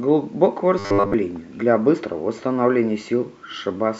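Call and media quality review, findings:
Robotic sound from repeated short buffers, 0.79–1.14 s: metallic 100 Hz buzz over the speech, likely starved playout looping a 10 ms buffer for most of that stretch.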